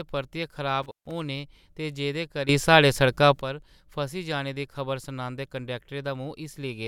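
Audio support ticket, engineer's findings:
Intermittent contact, 0.83–1.11 s: speech drops out for about 143 ms with crackle at both edges. Loose cable or plug; waveform shows a near-flat gap, spectrogram broadband clicks.

Sudden gain jump, 2.49–3.41 s: speech and noise floor step up about 12 dB together. Likely an unramped digital gain change; waveform shows a square-edged envelope step.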